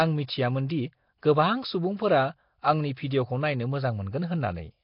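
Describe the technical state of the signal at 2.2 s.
At 2.2 s the speech sounds rough and smeared, with a hissy halo around it and a muffled, underwater quality. Nothing is heard above about 5.3 kHz. The cause is likely Nellymoser compression, the old Flash microphone codec. It codes short blocks with very few bits per sample, and bands too weak to earn bits are refilled with noise, which creates the hiss. The heavy damage points to a low rate near 22 kbps, and it spans the whole clip.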